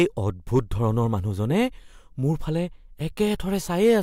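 From 0.56 to 0.86 s, the speech shows hard clipping. The peaks are driven about 2 dB past what the signal path can hold, so their tops are sliced flat. Those flat tops create harmonics high in the spectrum. The result is a crackle on the loudest moments. The same fault returns from 3.84 to 3.98 s, with about 3 dB of overdrive.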